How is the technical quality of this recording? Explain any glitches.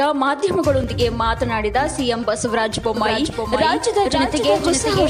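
The recording has two kinds of fault. There are brief skips early on, and a delayed duplicate runs through the final stretch.

Overlap between stream segments occurs at 0.84 s and 2.83 s. Overlapping timestamps make the player discard a sliver of real audio, so each point is a tiny skip. On a waveform, each shows as an abrupt discontinuity.

A doubled audio track starts abruptly at 2.97 s and lasts to the end. An echo-free full-band copy, about 5 dB quieter, trails by about half a second, likely from a second, slower capture path. A spectrogram shows the same patterns repeated, time-shifted.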